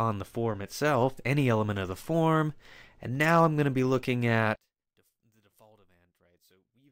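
At 4.56 s the sound suddenly drops by about 34 dB and stays down right through to the end, leaving only a small residue of what was there before. That's the classic signature of one channel inverted, which is the likely cause here: if one side of a stereo pair had its polarity flipped, summing to mono would cancel everything the two sides shared, background included, and only the slight difference between them would survive.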